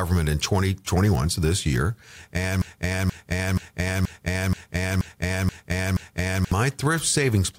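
Right after "so this year and", at 2.62 s, the speech hits a broken-record loop: a 0.48 s fragment repeats eight times back to back until 6.52 s. The stream likely stalled and kept replaying its last buffered chunk, so whatever came next is gone.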